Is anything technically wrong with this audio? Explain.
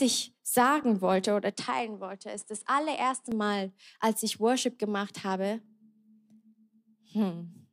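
Yes. From 1.55 s to 3.32 s the speech sounds as if the input switched to a poorer device, likely a change to another microphone partway through. With no gap at the switch, the sound drops by about 5 dB and turns duller, since nothing above 10.5 kHz gets through, and a new noise floor appears about 40 dB under the signal. On a spectrogram the upper band is cut off flat across that span, and the waveform shrinks a little.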